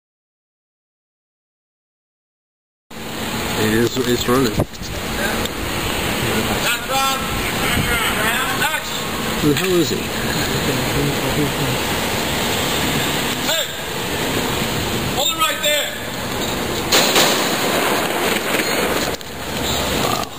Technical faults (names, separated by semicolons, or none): loud pop